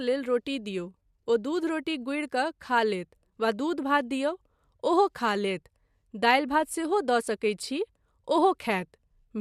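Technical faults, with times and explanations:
No technical faults are audible anywhere in this speech recording.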